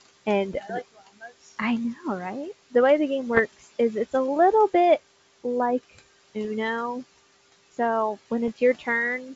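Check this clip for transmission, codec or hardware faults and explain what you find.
The clip has one kind of fault, heard three times: short pops and rough bursts with brief level jumps at 3.35 to 3.41 s, 6.45 to 6.48 s and 8.48 to 8.50 s. These are bit errors on an ADPCM link within the G.722 wideband coding. Flipped bits throw off the decoder's step size and predictor, so each error rings on for several milliseconds. The first burst is the roughest, which fits an error rate of a few tenths of a percent there and much less at the later two. Room noise sits about 21 dB below the speech.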